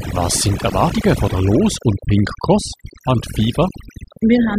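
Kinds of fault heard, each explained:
Overdone noise removal: an over-aggressive noise reducer mutes frequency bands near its noise estimate, so throughout the clip the background drops and breaks up into twinkling specks. Unlike a noise gate's whole-signal cuts, this works band by band.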